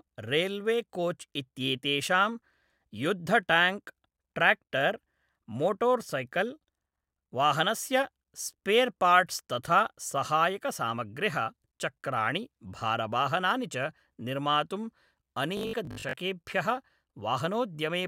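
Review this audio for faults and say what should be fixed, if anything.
The playback most likely starved of new data between 15.57 and 16.15 s, so the software kept refilling the gap by looping its last short buffer, producing robotic sound from repeated short buffers. Roughly half of the audio in that stretch is repetition rather than fresh signal. The loop rate imposes a fixed 50 Hz buzz, which fits a 20 ms buffer, turning the speech into a stiff, metallic drone that only loosely tracks the voice. To prevent it, enlarge the jitter or playback buffer and keep the audio thread from being starved, so that real audio always arrives before the output runs dry.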